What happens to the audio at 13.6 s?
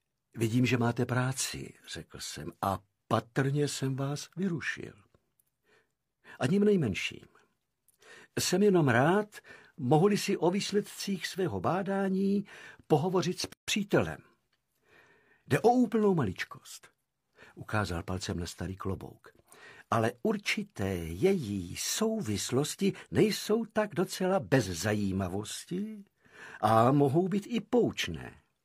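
At 13.53 s the sound drops out for about 150 ms, resuming at 13.68 s exactly where it left off. This is a gap at a join of encoded pieces: two separately encoded segments were butted together without trimming the encoder's start-up delay and last-frame padding. On a waveform it shows as a flat, near-zero stretch; on a spectrogram, a vertical blank band across all frequencies, its borders smeared by the codec.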